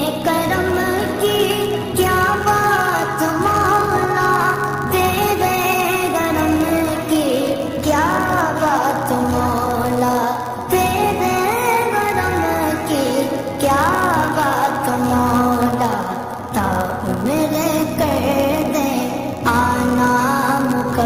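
The audio has a block size mismatch (padded) from start to finish. Each block arrives slightly short and is filled out with zeros. Those regular gaps produce a steady buzz near 99.6 Hz. The sound also runs slow, at 0.996 of normal speed, with its timbre kept.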